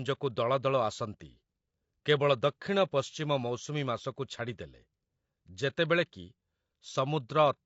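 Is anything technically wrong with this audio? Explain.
Yes. Throughout the speech, the signal likely passed through low-delay AAC compression (AAC-ELD) at a rate consistent with about 32 kbps. Its very short frames cannot separate the harmonics cleanly, so the speech sounds plainly rough and grainy, with noise between harmonics.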